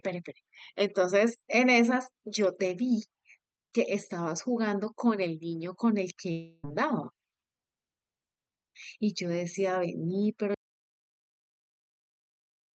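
Speech carried over a call link, heard through a band-limited codec that tops out around 8 kHz, consistent with Opus at roughly 64 kbps. From 6.31 to 6.65 s, the sound turns into a smeared, fading buzz for about a third of a second and then resumes with roughly 320 ms of material missing. This is a long network dropout, likely caused by a burst of lost packets. The receiver's concealment stretched the last audio it had across the whole gap, so no silence is heard, but whatever came in during that span never arrives. At 10.55 s the audio cuts abruptly into silence that lasts until the end of the clip, with no room tone or noise floor. This is an audio dropout to silence, likely from the input being disconnected or muted while the recorder kept writing silence, so everything after that point is lost.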